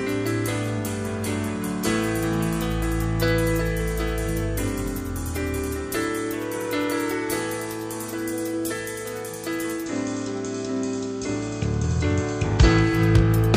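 At 9.73 s the digital radio blends to analogue FM over about 250 ms. The digital signal dropped out. Hiss rises, roughly 35 dB down. The level shifts by about 2 dB. At 13.02 s it returns to digital.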